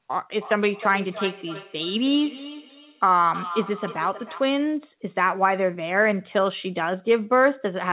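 From 0.41 to 4.64 s, a feedback echo between two devices: a second device in the room replays the call and the microphone picks it up again, so speech returns about a third of a second later, at up to about 12 dB below the speech. The narrowband call path, with nothing above 4 kHz, is part of the sound throughout.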